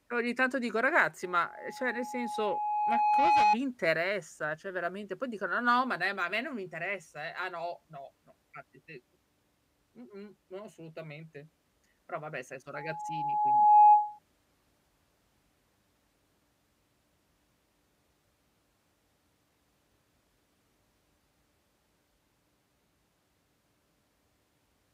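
Loudspeaker feedback squeal, 1.23 to 3.57 s and again 12.74 to 14.19 s. In this speech recording the microphone picks up its own loudspeaker. At 840 Hz the loop returns more than it sends, so that tone keeps reinforcing itself. The first squeal swells over roughly two seconds to about 10 dB above the speech. The second builds faster, in about a second, and climbs to about 15 dB above it, a piercing single pitch.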